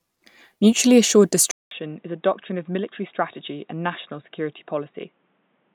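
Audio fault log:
1.51–5.74 s, input switched to a poorer device: after a 200 ms silence, the speech returns duller and boxier, about 10 dB quieter, with nothing above 3.8 kHz and a new background noise about 40 dB below the speech. The likely cause is the recording moving to a narrower-band microphone or a headset's call profile. On a spectrogram, a blank gap is followed by a flat ceiling at 3.8 kHz; on the waveform, the envelope is visibly smaller after the gap.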